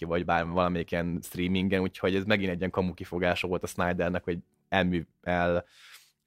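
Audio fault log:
No faults heard in this speech recording.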